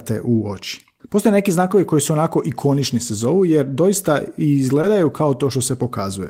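At about 4.81 s there's a short concealed packet loss: roughly 20 ms of the call didn't arrive in time, so the receiver patched the gap by extending the preceding sound and blending back in. You hear it as a quick smear or wobble.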